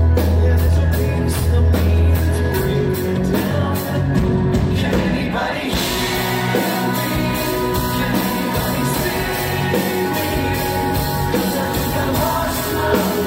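At 0.67 s the audio has compressed frames skipped: a couple of whole frames never reach the output, so the sound jumps forward by around 50 ms. On a waveform the envelope shows a small discontinuity. On a spectrogram a thin vertical smudge appears there, and whatever was evolving across the gap changes abruptly.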